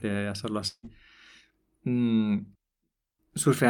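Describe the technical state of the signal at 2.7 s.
At 2.7 s the speech signal is intact, with no audible fault at that moment.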